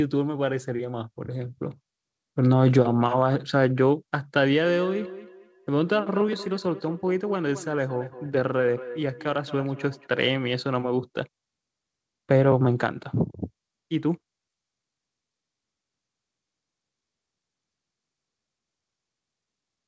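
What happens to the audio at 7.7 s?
At 7.7 s the speech is caught in a feedback echo between two devices, running from 4.64 to 10.1 s. A second device in the room plays the call back into a microphone whose echo canceller only removes its own playback, so each word returns at about 200 ms intervals, peaking about 16 dB below the speech. Unlike room reverberation's continuous smear, these are distinct, evenly spaced repeats.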